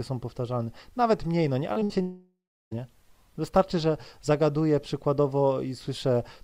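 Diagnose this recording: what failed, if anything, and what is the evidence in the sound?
Brief smears at 1.73 to 1.78 s and 1.80 to 1.83 s are short concealed packet loss: 20 ms gaps bridged by extending the preceding sound.

At 1.83 to 1.92 s a held, fading continuation covers a 60 ms hole. This burst of packet loss was concealed before the audio resumed further on.

From 2.02 to 2.78 s the sound stretches into a fading tail, then falls silent for 360 ms before returning. This is likely a long network dropout that lost about 700 ms.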